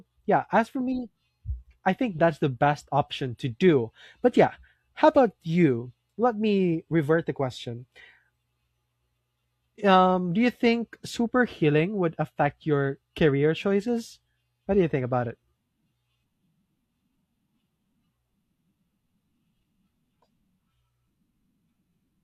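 Speech recording; no technical faults found anywhere in it.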